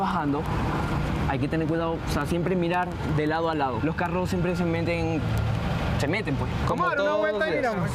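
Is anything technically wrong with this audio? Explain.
Yes. Word clock ticks run through nearly the whole clip, from 0.11 s to 7.92 s. They arrive about ten times a second, so roughly a hundred in all. A digital link is being read by a device on its own clock, not locked to the sender. The two clocks differ by something like 200 ppm. Each time they slip past each other, a single sample is dropped or repeated. The result is a steady train of sharp ticks.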